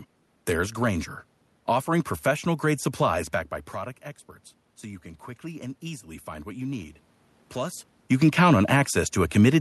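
From 4.83 to 7.01 s the automatic gain control rises. The level reaching the microphone has dropped by about 14 dB, so the gain climbs slowly, by about 4 dB over roughly two seconds. The voice and the room noise swell together. That shared rise marks it as a gain change rather than the talker moving, as around 3 s and 7.5 s, where only the voice changes and the background stays put.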